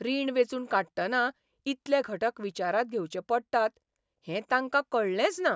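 A short speech recording with nothing technically wrong with it.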